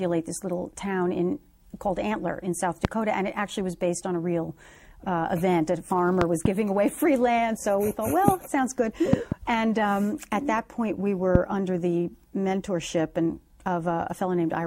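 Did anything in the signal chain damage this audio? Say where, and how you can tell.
Yes: loud pops roughly 20 dB above the sound at 2.85–2.87, 8.28–8.31 and 11.35–11.38 s, doubled at 6.21–6.48 and 9.13–9.34 s, likely from voltage spikes in the analogue wiring.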